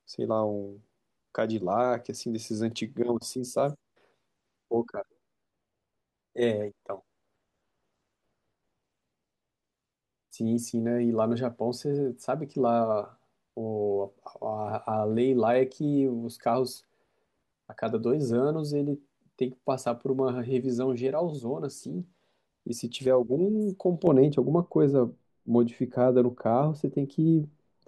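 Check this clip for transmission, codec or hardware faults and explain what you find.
There's one fault, and it's right at the end. From 24.07 s to the end, de-emphasis is applied wrongly: a treble-cut filter rolls the speech off smoothly, leaving 10 kHz about 11 dB down relative to 1 kHz, with no matching pre-emphasis to undo. The result sounds dull and muffled.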